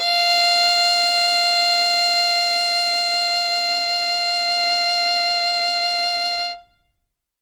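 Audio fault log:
throughout, Opus compression: the music sounds plainly rough and grainy, with tones turned noisy. This is likely the CELT music mode at a rate that fits about 24 kbps, refilling starved bands with folded or noise content. A spectrogram shows speckled, smeared harmonics reaching 20.1 kHz.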